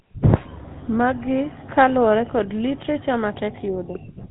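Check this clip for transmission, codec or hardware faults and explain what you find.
The speech carries one fault for its whole length: GSM full-rate codec damage. The gravelly, buzzy texture fits the 13 kbps rate. Only a sparse pulse excitation drives the vocal-tract model, and nothing above 4 kHz survives. The roughness is plainly audible.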